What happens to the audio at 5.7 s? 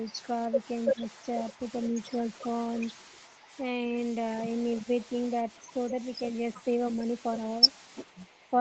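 Around 5.7 s you're hearing an echo leak, running from about 5.49 to 6.65 s: a very faint copy of the speech trails roughly 334 ms behind. The likely cause is a far-end loudspeaker echo that the echo canceller didn't fully remove before sending it back.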